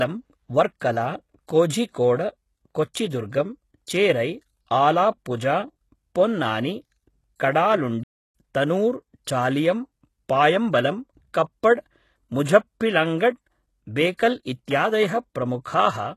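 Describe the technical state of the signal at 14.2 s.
At 14.2 s the speech carries pre-echo from 14.15 to 14.19 s. The codec spread its quantisation noise across a block, so hiss fills about 43 ms of the quiet lead-in before the attack and the onset sounds soft and smeared rather than crisp.

The audio also carries HE-AAC compression damage here and throughout, plainly audible, likely at a low rate that fits roughly 16 kbps. The upper band is rebuilt from copied lower bands, so sibilants come across gritty and metallic, with harmonics misaligned across the crossover.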